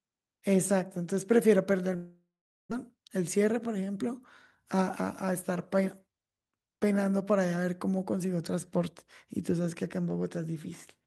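At 1.95 s the speech breaks off. What follows sounds like a long network dropout, the likely cause being that no packets reached the receiver. The receiver stretches the last sound into a buzz that fades. About 440 ms of near silence follows. The gap lasts until 2.73 s. When the speech returns, roughly 600 ms of it is simply gone. The playback now runs about a seventh of a second later than before.

A jitter buffer speed-up follows from 2.84 to 4.04 s. The buffer now holds more audio than it wants. So the receiver cuts out many tiny pieces, each a pitch period or a few long. The speech plays at 107% speed with its pitch unchanged, trimming about 100 ms. A second, gentler speed-up runs from 4.74 to 5.51 s at 105%, removing about 50 ms. Both stretches sound hurried.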